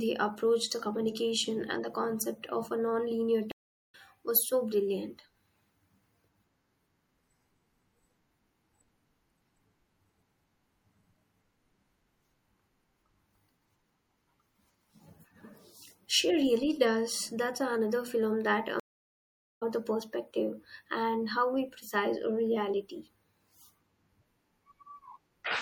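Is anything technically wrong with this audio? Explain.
Yes, there are two problems. Throughout the speech there's a watery, swirly quality with dulled treble and smeared attacks. That's likely MP3 compression at a low rate, something like 64 kbps, where the encoder cuts the top end and lets weak frequency components flicker frame to frame.

There's also a stream reconnect twice: at 3.52 to 3.95 s the audio drops out for 0.42 s, and at 18.80 to 19.63 s for 0.81 s. The connection broke, the player restarted decoding mid-stream, and the speech picks up further along, roughly 0.4 s and a second later, so material is skipped.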